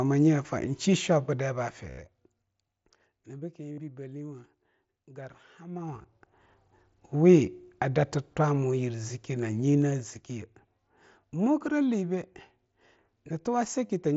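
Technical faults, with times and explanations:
1.90, 3.73, 5.98 and 13.86 s, concealed Bluetooth headset packet loss: audio between headset and phone was lost for 75, 52.5, 30 and, around 5.98 s, scattered bits over 60 ms (longest 15 ms). Each gap is filled by repeating the last few milliseconds of mSBC wideband sound, so instead of silence the longer runs give a buzzy held tone at full level with a slight warble when real sound resumes.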